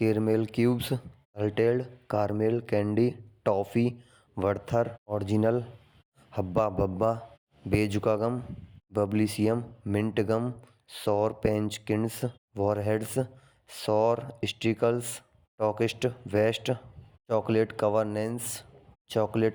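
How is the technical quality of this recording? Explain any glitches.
No technical glitches are audible in this recording.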